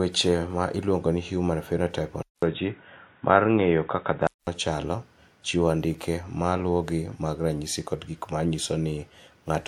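Speech, and from 2.23 to 4.47 s it goes dull and boxy, with nothing above 3.8 kHz, a faint new noise underneath, and the level barely shifting. A 200 ms silence opens it up. That's likely an input switched to a poorer device before it swaps back.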